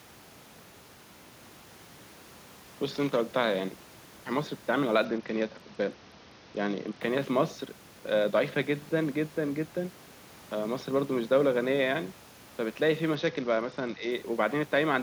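From 5.05 to 7.01 s, and again from 13.15 to 14.11 s, the speech turns dull and gritty, losing its treble. This is a Bluetooth SBC bit pool drop: a congested link forced a much lower bit pool, which fits a fall to about 72 kbps, starving the upper sub-bands.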